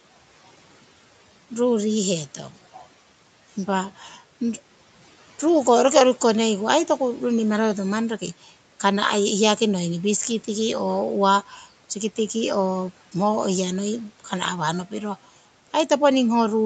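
At 3.99 to 4.15 s and again at 11.49 to 11.65 s, speech cut by the noise suppressor pulls about a tenth of a second of speech down by about 7 dB and about 6 dB, mistaken for noise. Unlike a packet-loss gap, the sound fades with the background rather than vanishing or glitching.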